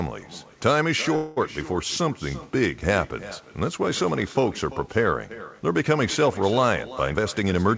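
Echo with no canceller runs through the whole clip. The far end's loudspeaker feeds back into its microphone, so the speech returns about a third of a second later as a thin copy about 17 dB quieter, smeared over every phrase and band-limited below 8 kHz like the rest of the call.

A call audio freeze comes at 1.16 to 1.39 s. The receiver's jitter buffer likely ran dry while packets were held up, and it stretched the last sound into a fading buzz or hiss for about 206 ms. When packets resumed, the speech continued where it had stopped, now running that much later.

A jitter buffer speed-up follows at 7.10 to 7.69 s. With surplus audio queued, the receiver repeatedly cut short pitch-period slices, around 150 ms in total. The speech plays at 120 percent speed with unchanged pitch and sounds noticeably hurried.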